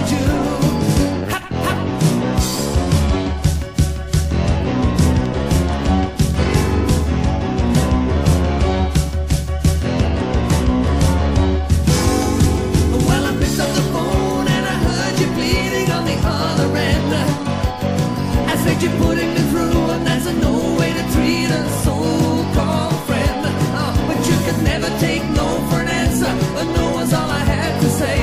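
Nothing technically wrong turns up here; the audio runs along without any dropouts, glitches or other faults to point at.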